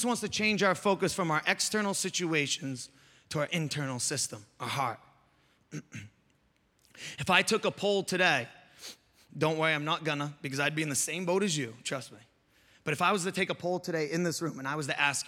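From 13.61 to 14.81 s, just after "was to take a", the speech turns hollow from channel delay (comb filtering). One channel lags the other by a fraction of a millisecond before the mono sum, cutting fixed notches starting around 3 kHz, so the upper presence sounds thinned and phasey.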